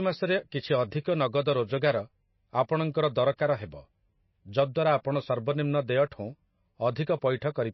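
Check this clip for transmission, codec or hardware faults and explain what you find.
There's one fault, running through the whole clip: MP3 compression, likely at a low bitrate, something like 26 kbps going by the sound. Nothing comes through above 5.8 kHz, and the damage is plainly audible. With bits this scarce, the encoder drops weak frequency lines that flicker on and off between frames, so the speech takes on a watery, swirly texture with smeared attacks.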